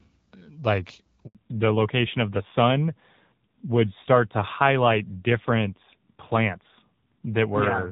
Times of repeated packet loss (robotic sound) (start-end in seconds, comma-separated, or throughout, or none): none